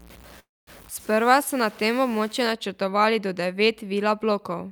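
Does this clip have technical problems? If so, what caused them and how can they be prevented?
Yes. From 0.0 to 2.52 s the speech is grainy with low bit depth without dither, distortion roughly 25 dB below the signal that tracks its level, likely truncation to around 7 bits. On a waveform the quiet parts step in coarse levels. Keep enough bits and add dither before any reduction.

From 0.39 to 0.70 s a call audio freeze stretches the last sound into a fading buzz, then about 220 ms of silence. The speech resumes where it stopped, about 0.28 s late. A spectrogram shows smeared, frozen bands and then a blank gap. A larger adaptive jitter buffer and a steadier network path prevent this.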